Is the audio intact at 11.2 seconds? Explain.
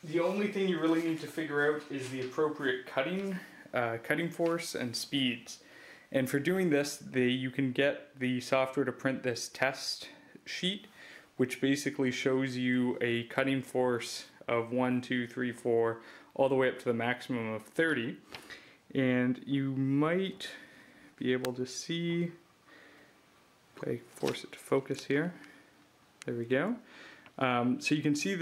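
Yes, the audio plays through cleanly at 11.2 s, with no dropout, click, distortion or other technical fault at that moment.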